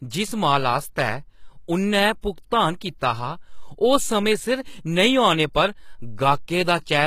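Throughout, the speech shows plainly audible damage, likely from HE-AAC compression: treble copied up from lower bands makes s sounds gritty and metallic, and nothing remains above 14.9 kHz.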